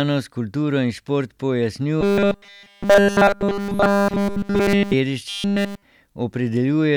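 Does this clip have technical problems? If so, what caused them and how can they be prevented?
Yes. Robotic sound from repeated short buffers appears at 2.01 to 4.93 s and 5.29 to 5.82 s. The speech becomes a rigid 200 Hz buzz, which fits a 5 ms block being looped, likely because new audio arrived too slowly. Larger buffers and a steadier audio feed would prevent it.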